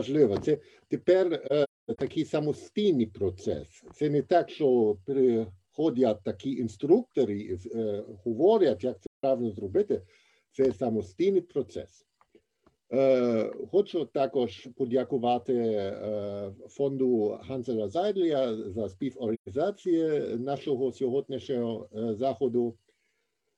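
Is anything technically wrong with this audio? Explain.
Yes. AAC frame loss with muting leaves soft-faded gaps at 1.46–1.99 s (about 300 ms longest run within a scattered cluster), 9.06–9.24 s, and 19.34–19.49 s. The decoder zeroed the spectrum of the missing frames, and the overlapping windows taper the sound out and back in. A spectrogram shows blank vertical bands, and the waveform shows tapered dips to silence.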